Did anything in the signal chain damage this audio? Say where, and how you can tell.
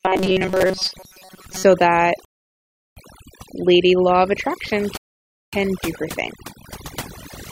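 Yes. Overdone noise removal, at the call-processing stage, runs through the whole clip: the background drops and breaks up into twinkling specks. Unlike codec smearing, the damage tracks the noise floor, with quiet speech bands gated away.

From 0.01 to 1.64 s the speech becomes a rigid metallic buzz at 188 Hz, likely robotic sound from repeated short buffers at the driver or buffer stage. A chunk of about 5.3 ms is repeated over most of the span, fixing that pitch. Unlike dropouts, there are no gaps.

Two rebuffering stalls at playback, from 2.25 to 2.97 s and from 4.97 to 5.53 s (just before "do her thing"), add about 719 ms and 555 ms of silence. The speech resumes exactly where it stopped, which separates these from packet loss, where audio goes missing.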